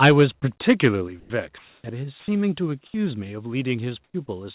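From 0.02 to 0.23 s, the input level was likely set too high for the microphone's converter. This microphone overload drives peaks about 9 dB past the converter's limit and flattens a noticeable share of the waveform. The loudest syllables take on a harsh, crackly edge. Partway through that stretch, at 0.09 s, the call software likely reacted to the overload by stepping the microphone volume down by about 2 dB. The speech and the room noise behind it drop together in one audible notch.

At 0.40–0.42 s, the sender's voice detector likely mistook part of the sound for background and stopped sending. This is sound dropped by the voice detector. About 10 ms of real sound gives way to flat synthetic noise, a brief dent in the syllable.

A second microphone overload, at 0.68–0.87 s, is milder, about 3 dB over with only a small fraction of samples cut. It leaves a thinner grit on the peaks. At 1.08 s the volume steps down again, this time by about 4 dB, a more obvious sag in level. 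From 1.20 to 1.30 s, the detector likely gated out a full 100 ms of speech, and a short hole filled with steady hiss opens in the phrase.

From 1.58 to 1.84 s, the line likely went into discontinuous transmission during a pause. It shows as comfort noise in place of the background. The real room sound, about 42 dB under the loud speech, is swapped for a smooth, featureless hiss about 2 dB louder. The detector was then likely late to register the restart. This onset clipped by the voice detector removes the first 30 ms, so the sound entering at 1.84 s starts abruptly, with no soft attack.

At 2.20–2.28 s, about 60 ms of speech is again dropped for synthetic noise. At 2.67 s a third volume step of about 2 dB pulls the level down once more. At 2.86–2.94 s, a brief 80 ms of comfort noise likely stands in for the background, about 34 dB under the speech. This patch is about 6 dB quieter, a momentary hollowing of the room tone.

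Near the end, the voice detector likely drops speech twice more. About 50 ms is lost within 4.04–4.14 s and about 10 ms at 4.26–4.28 s, each a small noisy gap. Throughout, the call path's narrowband sound, with nothing above 4 kHz, fits a G.711 telephone codec.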